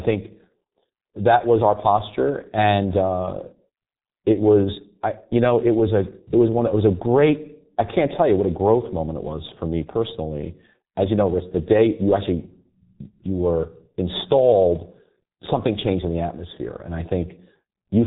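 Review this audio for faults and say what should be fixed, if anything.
G.723.1 codec damage runs through the whole speech clip: nothing above 3.8 kHz, with a hoarse, muffled tone and smeared consonants from slow 30 ms frame updates. The heavy damage points to roughly 6 kbit/s, and unlike a plain low-pass filter, which leaves a clean but dull sound, the coarse voice model adds roughness. To prevent it, carry the call on a wideband, higher-bitrate codec such as Opus.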